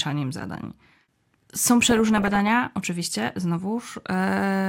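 This is speech. From 1.82 to 2.40 s, DAB burbling adds short noise blips in sub-bands. Bit errors, roughly under one percent, corrupt MP2 audio data frame by frame.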